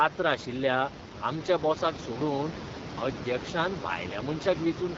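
All the way through, the speech has that rough, raspy AMR wideband (HD Voice) codec sound, which fits one of its lowest rates, around 8.85 kbit/s. Room noise sits about 14 dB underneath.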